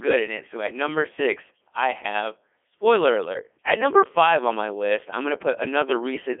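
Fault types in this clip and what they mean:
Codec 2 vocoder: speech rebuilt as sine waves from pitch, voicing and envelope data, sounding robotic and buzzy, consistent with the 3.2 kbit/s mode. Spectrograms show tidy synthetic harmonics between 300 Hz and 3.4 kHz, nothing above 3.6 kHz; waveform shape is not preserved.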